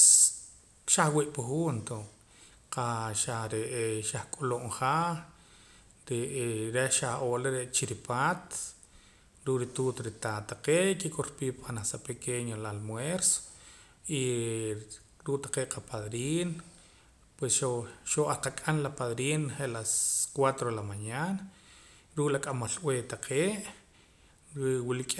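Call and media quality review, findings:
No audible faults found.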